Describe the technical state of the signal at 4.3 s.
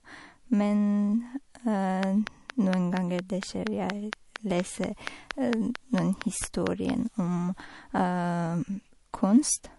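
At 4.3 s you're in the middle of a train of clicks running from 2.03 s to 6.91 s: evenly spaced, closely similar pops at 4.32 per second, around twenty in all, standing roughly 20 dB above the speech. That pattern likely comes from interference from nearby equipment or a faulty connection or power supply, injecting a pulse at a steady rate.

Under that, the whole clip carries plainly audible MP3 compression: a watery, swirly texture as weak frequency components drop in and out between frames, and nothing above 11.3 kHz. That fits a low bitrate, likely around 48 kbps.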